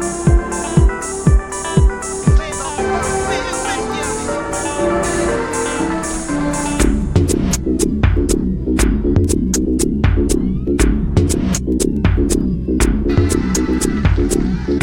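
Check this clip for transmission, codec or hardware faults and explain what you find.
One hardware fault runs through the whole clip: mains hum. A ground loop or nearby transformer leaks the 50 Hz power line into the signal, leaving a steady low tone roughly 30 dB below the audio, with some low harmonics. Its fixed pitch and constant level distinguish it from mechanical rumble, which wanders and spreads across a broad band.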